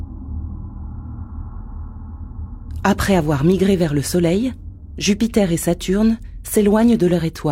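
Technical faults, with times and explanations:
No technical faults can be heard in this clip. Nothing in the audio calls for a timed entry.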